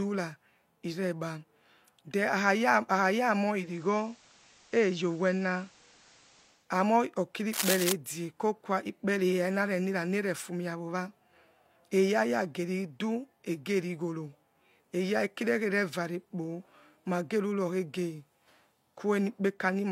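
A speech recording with two separate faults. From 3.48 to 6.72 s a hybrid receiver blends from digital radio to analogue FM and back, with cross-fades of about 320 ms. Hiss rises to roughly 30 dB below the speech, while the level holds steady. That extra hiss sets it apart from a plain low-pass filter or a codec dropout. From 7.53 to 7.93 s comes cable scratch noise: dense, uneven bursts of rustling at about the same loudness as the speech. They most likely come from a worn cable, connector or control being moved. That clustered scratching differs from the isolated, regularly shaped clicks of vinyl crackle or digital glitches.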